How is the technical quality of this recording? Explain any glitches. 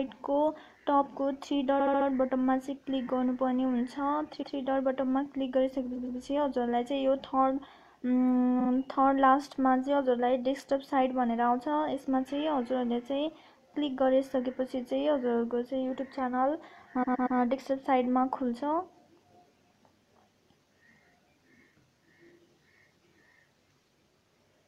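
The recording has repeated frames, heard as five stutters. At 1.79–2.07 s a 70 ms block plays four extra times. At 4.41–4.55 s a 139 ms block plays once more. At 5.95–6.18 s a 116 ms block plays twice more, at 8.59–8.69 s a 46 ms block twice more, and at 17.02–17.37 s a 116 ms block three times more. Block lengths step in about 23 ms units, which fits short compressed frames being resent and decoded again. Each repeat lengthens the audio. A spectrogram shows identical tiled slices.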